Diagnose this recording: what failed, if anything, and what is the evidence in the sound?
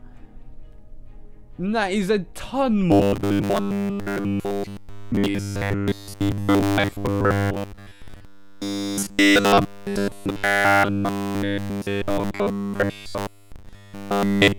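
From 2.92 s through to the end at 14.59 s, the audio turns into a rigid metallic buzz pitched at 100 Hz. That's robotic sound from repeated short buffers, likely a starved driver or buffer stage looping the last 10 ms over essentially all of that stretch.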